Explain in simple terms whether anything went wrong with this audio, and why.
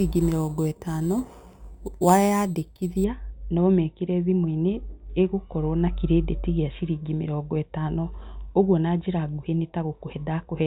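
For the first 3 seconds, up to "no ũmĩkĩre", the speech carries a bright metallic fizz. That's imaging from sample-and-hold upsampling: the audio was stretched from 8 kHz to 44.1 kHz by repeating samples without smoothing, leaving mirror copies between 4 and 8 kHz.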